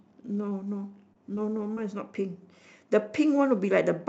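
Between 0.41 and 1.79 s there are scattered short gaps: about four lost packets, none longer than roughly 20 ms, each patched by extending the preceding sound, giving brief ticks and smears.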